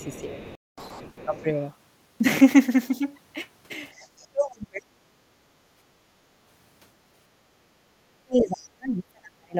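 From the very start of the speech, 0.00 to 0.22 s, a faint second voice sits under the talker at roughly 25 dB below it, and it returns from 0.39 to 1.44 s. This is the other side's voice leaking through, most likely because the far-end signal played on the talker's loudspeaker was picked up by the microphone and not fully cancelled. Unlike double-talk suppression, nothing is taken away from the main voice: something extra is added, a distinct and quieter talker underneath.

Between those two stretches, from 0.24 to 0.39 s, the talker's own voice sags by around 10 dB for a brief moment. This is speech suppressed in double talk. While both ends were active, the echo canceller likely could not tell its own talker from the echo and turned everything down. The same dip recurs more briefly from 1.25 to 1.36 s. From 3.99 to 4.98 s and from 8.24 to 9.57 s it becomes severe, cutting the voice by as much as 35 dB or so, to near silence, for around a second the first time and around a second and a half the second.

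At 0.55 s the audio stops dead for 224 ms, until 0.78 s. This is a playback stall, likely caused by the player running out of data or being blocked. The sound goes silent in mid-flow rather than fading or dipping. That separates it from suppression, where a weakened voice remains.

Straight after the stall, from 0.78 to 1.00 s, comes catch-up at higher speed. The player races through its backlog at 2× speed, and the pitch jumps by around ten semitones, giving a brief chipmunk-like rush before normal rate returns. The sudden rise in pitch is the clear sign of catch-up, since level changes never shift pitch.

Finally, from 5.36 to 5.56 s and again from 5.94 to 6.07 s, the room sound drops away by about 12 dB and about 9 dB. This is background gated by the echo canceller. While the loudspeaker was active, the microphone path was clamped down hard. Here it is the ambient bed that ducks and springs back within a fraction of a second, not the talker's voice, which sets it apart from double-talk suppression.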